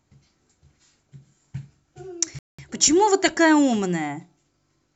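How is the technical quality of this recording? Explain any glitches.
The recording has one glitch, a dropout near the middle. From 2.39 to 2.59 s there is a Bluetooth stall: wireless interference likely delayed packets until the headphones' buffer emptied. The speech cuts to dead silence for about 0.2 s, then sound resumes once the delayed data arrives.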